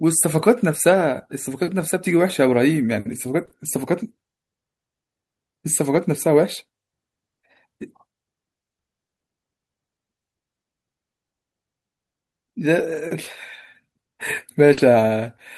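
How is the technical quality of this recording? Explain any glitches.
The recording suffers from packet loss, handled two ways, leaving short rough or smeared patches in the speech.

Lost packet rebuilt from error correction, at 0.89–0.95, 1.79, 3.41–3.43, 5.95, 7.81, 12.77–13.03 and 14.77 s: packets went missing, and the decoder played the low-bitrate copies carried in the following packets. There's no gap, but those stretches turn grainier and noisier. The longest, about 140 ms near 12.8 s, fits a run of several lost packets.

Short concealed packet loss, at 3.45–3.49, 3.49–3.53 and 14.73–14.79 s: no copy arrived in time, so the receiver extended the preceding sound to fill 20–40 ms before blending back. This is heard as a brief smear or wobble, and a short consonant can drop out.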